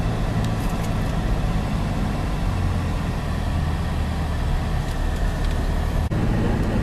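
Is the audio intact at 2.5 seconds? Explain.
Yes, at 2.5 seconds the audio plays through intact, with no fault to be heard at that moment.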